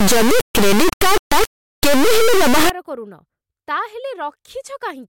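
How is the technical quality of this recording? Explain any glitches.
Poor for the first part of the clip. From 0.0 to 2.7 s, integer samples are read as float: 32-bit integer data is interpreted as floating-point, so values land near zero or far beyond full scale, producing an extremely loud buzzing square wave that drops out to silence in quiet moments.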